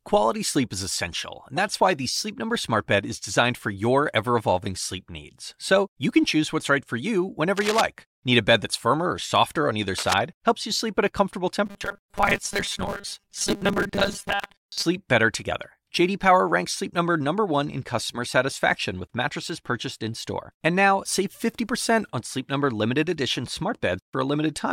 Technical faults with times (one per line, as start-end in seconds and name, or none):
7.56-7.81 cable scratch noise
9.96-10.14 cable scratch noise
11.66-14.84 robotic sound from repeated short buffers